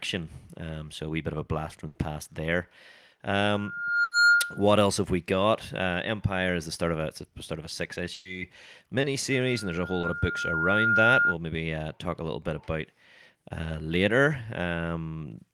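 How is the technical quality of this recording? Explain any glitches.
The recording has clear technical problems: three bursts of packet loss, two episodes of feedback howl, and two brief concealed dropouts.

Burst of packet loss at 1.87–1.97 s, 4.03–4.13 s and 8.13–8.27 s. Runs of packets arrived too late or not at all, so the receiver stretched the last sound across 80, 80 and 120 ms gaps. This produces a held buzz or fading hiss, then speech resumes with that stretch missing.

Loudspeaker feedback squeal at 3.49–4.70 s and 9.31–11.36 s. The microphone picked up its own loudspeaker, and the loop gain passed one at 1.4 kHz. A pure tone swells over roughly 0.7 s and 1.5 s respectively, peaking around 10 dB above the speech.

Short concealed packet loss at 9.01–9.05 s and 10.01–10.05 s. About 20 ms of audio each time never reached the decoder, and the receiver patched it by extrapolating the preceding sound before blending back. 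Each is heard as a brief smear or wobble.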